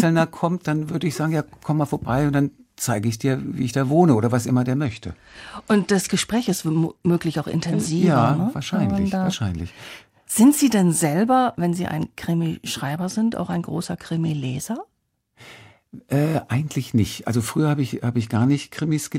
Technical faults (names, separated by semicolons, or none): Bluetooth SBC bit pool drop